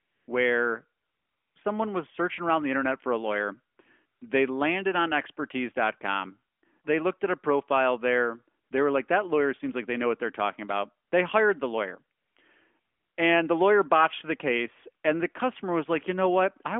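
The phone repeatedly judged the talker silent and stopped sending speech frames, so AMR comfort noise fills ten gaps between 0 and 13.2 s, lasting 20 to 540 ms. The longest, 1.02 to 1.56 s, precedes "someone was searching around". Each gap becomes smooth synthetic hiss.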